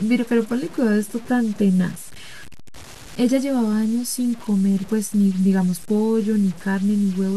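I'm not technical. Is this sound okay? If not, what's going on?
No. Low bit depth without dither runs the whole way through: the speech sounds gritty and grainy, likely from being stored with too few steps, around six bits.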